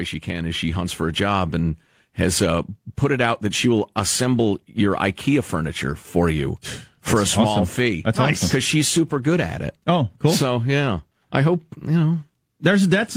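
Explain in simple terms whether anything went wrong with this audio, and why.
Something did go wrong near the start: automatic gain rising. From about 0.25 to 1.6 seconds the recording gradually gets louder, settling just before "has uh put it". The device's automatic level control judged the input too quiet and slowly turned itself up. What sets this apart from someone simply speaking louder is that the background noise swells at exactly the same pace as the voice, so the whole sound rises together rather than the talker alone.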